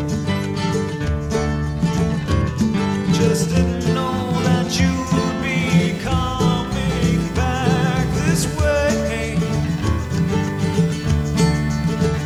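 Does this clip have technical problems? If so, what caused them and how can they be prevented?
Yes. Computer activity noise, a buzzing chirp pulsing at around 500 Hz and roughly 20 dB below the sound, begins at 3.93 s and continues to the end, as processor or graphics load shifts the shared ground. A ground-isolated or external USB interface prevents it.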